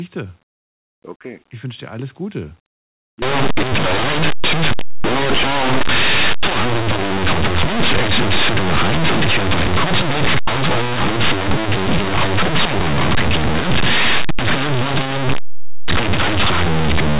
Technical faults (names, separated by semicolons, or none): linear audio read as companded